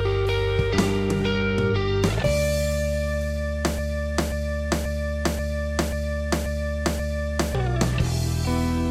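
Music that, from 3.79 s to 7.55 s, falls into a broken-record loop: a 535 ms fragment repeats seven times back to back, most likely from a stalled player or stream resending its last buffer. The music meant for that span is lost. A spectrogram or waveform shows identical blocks tiling at exact 0.54 s intervals.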